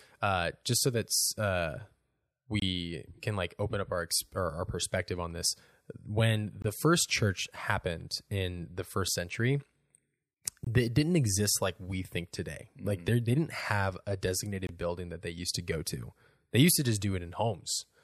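Short silent holes break the speech at 2.60–2.62, 6.62–6.64, 10.64–10.67 and 14.67–14.69 s. Each is a gap between chunks, about 23 ms long. The audio arrives in 4-second pieces, and silence sits at every join.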